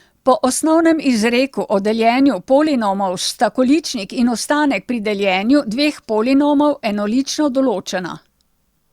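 No technical faults occur at any point in the recording, so there is nothing to describe in time order.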